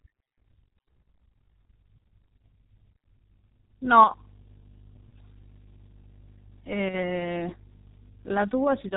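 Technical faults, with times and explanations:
Throughout, G.723.1 codec: muffled, hoarse speech with smeared consonants, consistent with a coarse 6 kbit/s coder; the spectrogram shows a hard ceiling at 3.8 kHz and blurred formants.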